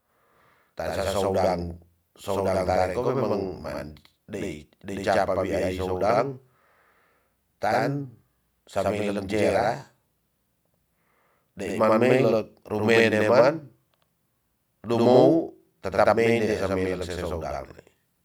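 Throughout the speech, there is a channel delay causing doubling. One channel runs late by about 85.33 ms, which fits a 4096-sample buffer at 48 kHz. The two channels are then summed to mono. That gap is too long to blend. So every syllable arrives twice, at equal level. It sounds like a close slap echo trailing each sound, and the speech takes on a doubled edge from start to finish.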